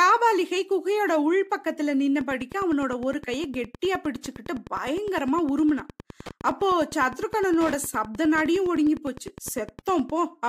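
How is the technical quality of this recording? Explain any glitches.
The speech is marred by Wi-Fi interference running from 2.13 s to 10.13 s. Throughout that stretch a steady ticking sits under the speech, about ten clicks a second, roughly 20 dB below it. The cause is a nearby Wi-Fi radio whose beacon transmissions, spaced 102.4 ms apart, are picked up by the audio circuitry and rectified into the signal, turning each radio pulse into an audible tick.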